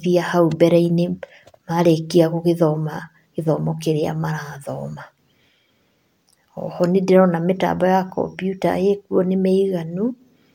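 No technical faults can be heard at any point in the speech recording.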